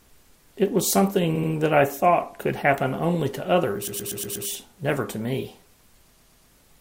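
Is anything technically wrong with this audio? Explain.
Yes, the speech has repeated frames, a stutter at 1.35–1.51 s (an 80 ms block played twice more), 3.87–4.47 s (a 120 ms block, five extra plays) and 6.13–6.49 s (120 ms, three extra plays). Stretches of compressed frames were decoded again, lengthening the audio. Spectrograms show identical tiled patterns.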